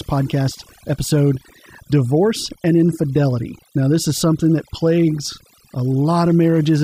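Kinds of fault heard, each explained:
Overdone noise removal: noise reduction set too strong for the entire clip, cutting individual frequency bands wherever they approach the estimated noise floor. Gaps drop in level and break up into twinkling specks, and the quieter components of the speech go too.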